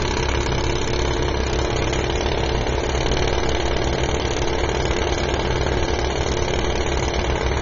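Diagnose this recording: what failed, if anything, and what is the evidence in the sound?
The codec stage is the weak point throughout. Nothing comes through above 7.6 kHz, and the top end sounds dull and smeared with a fizzy, warbling texture. That's plainly audible AAC compression, likely AAC-LC at a low bitrate, around 24 kbps, dropping its cut-off and starving the upper bands.

There are also loud pops from the analogue wiring or driver side. A double pop lands between 0.34 and 0.55 s, and a single one at 3.68 to 3.70 s. Each sits roughly 10 dB above the sound, which keeps going underneath. That points to sudden voltage pulses, likely from a plug, switch or static, riding on top of the signal.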